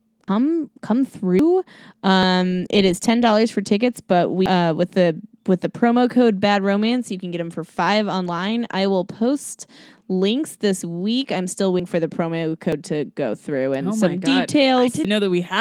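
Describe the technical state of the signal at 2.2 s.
At 2.23 s there is an abrupt jump forward in the speech, with about a tenth of a second missing and no silent gap. That points to a likely dropped buffer (overrun): samples were overwritten before being read, and the two sides were joined directly.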